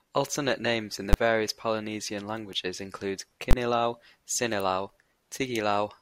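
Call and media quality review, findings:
Invalid numbers at full scale, speech. Loud bang at 1.13 s. Block about 10 ms, pinned flat at one extreme value. Second bang 3.51 to 3.53 s, about 20 ms. Probable component: a processing stage whose arithmetic produced infinite or invalid values. Output clamped to maximum positive or negative for the whole block. Blocks this short collapse into a single hard crack, not separate pops. Nothing between edges. Check for divide-by-zero or unguarded gain.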